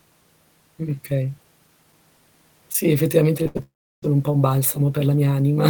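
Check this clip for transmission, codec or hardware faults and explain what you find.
The clip has a cluster of network faults between about 3.43 and 4.04 s: two short concealed losses around a burst, then a long dropout.

Short concealed packet loss occurs at 3.43 to 3.47 s and again at 3.57 to 3.61 s. Each time about 20 ms of audio failed to reach the decoder, and the receiver patched the gap by extending the preceding sound for roughly 18 ms before blending back into real audio. Each patch is a brief smear or wobble, so a short sound at that point can drop out.

A burst of packet loss sits between those two patches, from 3.47 to 3.57 s. About 80 ms of consecutive audio went missing, and concealment carried the last sound forward for roughly 77 ms while turning it down. That produces a held, fading buzz or hiss in place of the real audio. The sound resumes further along, with the lost stretch gone.

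A long network dropout is the likely cause of the gap from 3.63 to 4.04 s. Around 400 ms of audio never played. A short fading continuation of the last sound gives way to about 340 ms of silence. The audio returns at "un po' un", with the preceding material missing.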